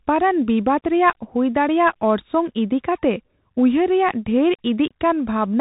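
Speech running through a Bluetooth CVSD headset codec throughout: nothing gets past 3.8 kHz, s sounds turn scratchy, and a grainy hiss sits underneath, which fits a 64 kbps headset link.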